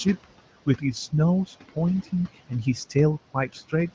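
Noise suppressor artifacts run through the whole of this short speech recording. The suppressor pulls down whatever it judges to be steady background by about 17 dB, band by band and frame by frame. So the room noise, which sits only about 16 dB below the voice, drops away in the gaps and returns beneath each phrase rather than holding a constant floor. Speech cut by the noise suppressor occurs twice, between 1.47 and 1.77 s and again between 3.34 and 3.73 s. In each span the processor mistook parts of the voice for noise and turned them down with the background, by up to about 15 dB in the first and about 13 dB in the second. Roughly a tenth of a second of sound is affected in each span, so the affected speech comes across as swallowed or faint.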